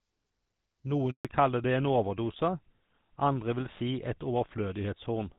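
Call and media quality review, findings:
Handover gap, 1.11 to 1.25 s. Speech cuts out for 140 ms, fading within milliseconds, then silence. Probable component: network handover. No speech frames arrived during the switch. Speech in the gap is lost.

Fallback to narrowband, 1.25 s to end. Nothing above 4 kHz, and the voice turns duller and rougher. Probable component: codec renegotiation. The call left HD Voice, whose earlier wideband sound fits AMR-WB at 12.65 kbit/s, for something like GSM full rate.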